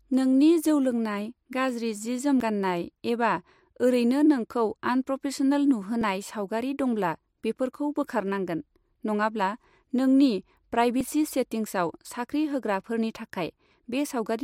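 Speech clip with three skips at 2.40, 6.01 before "सावगारि दंब्ला बेफोरखौ बोखारनांंगोन", and 11.01 s. Each jumps ahead without silence, losing about 40, 10 and 40 ms. This likely comes from a dropped buffer (overrun).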